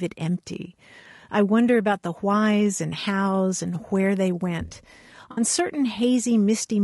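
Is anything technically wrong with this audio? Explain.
Yes. Throughout the speech there is plainly audible roughness and graininess, with noise filling the gaps between harmonics and a dull, synthetic-sounding top band. This is likely low-delay AAC compression, whose short frames resolve pitch poorly at a low rate that fits around 32 kbps. It is steady rather than bursty, unlike packet damage.

From 5.31 to 5.41 s there is AAC frame loss with concealment. The decoder filled about 60 ms, which fits three lost frames, from the last good spectrum, leaving a smeared, phasey patch rather than a click or a silent gap.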